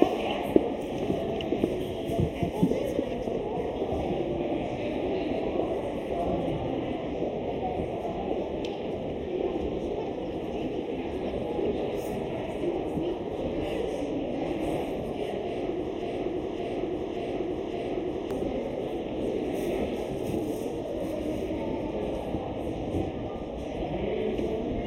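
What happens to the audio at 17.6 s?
At 17.6 s the audio is inside a broken-record loop that runs from 16.02 to 18.31 s. The playback or stream likely stalled and kept re-sending the last fragment it held, a 0.57 s slice that plays back to back four times. At 17.6 s you are hearing one of those identical repeats, so the sound stutters in a rigid rhythm, and whatever should have played during those two-odd seconds is gone.

Running under the whole clip, including this moment, is channel delay causing comb filtering. One channel arrives roughly 0.3 ms late, and when the two are summed to mono, content common to both cancels at evenly spaced frequencies, the first notch sitting around 1.5 kHz. That carves fixed holes into the upper mids and treble, giving the repeating fragment a hollow, phasey colour.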